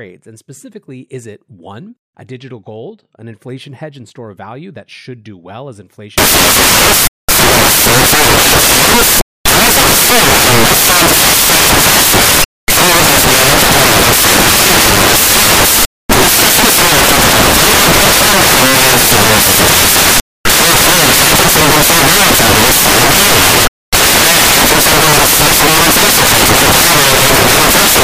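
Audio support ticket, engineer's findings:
Samples built from the wrong bytes, 6.18 s to end of clip (28.04 s). Decoder/reader stage mis-assembling sample bytes: offset by a byte, swapped order, or wrong alignment. Low-order bits land in the high positions, so the speech is replaced by loud, harsh broadband noise.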